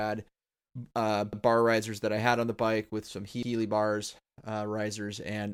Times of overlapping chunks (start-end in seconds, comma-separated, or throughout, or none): 1.33-1.43, 3.43-3.53